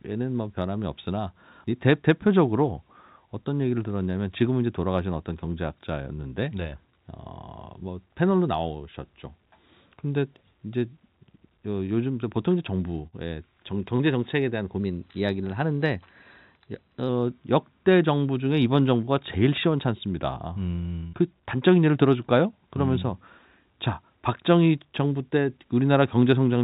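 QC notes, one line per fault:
13.07–13.15 s and 21.07–21.16 s, burst of packet loss: a run of packets went missing each time, so the receiver stretched the last sound for about 50 ms (nearer 60 ms the second time) while fading it, then jumped ahead with about 60 ms of speech gone.
13.96–14.02 s, short concealed packet loss: a brief gap the decoder papered over by extending what came just before for about 33 ms, then crossfading back in. You hear a quick smear or wobble where about 30 ms of real audio never arrived.
14.8–17.09 s, drift correction step: everything runs about 5.5% fast and sits roughly 92 cents sharp, close to a semitone. That's likely clock-matching software changing playback rate in one jump to rebalance its buffer, over a band-limited line with nothing above 4 kHz, consistent with G.711 A-law at 64 kbps.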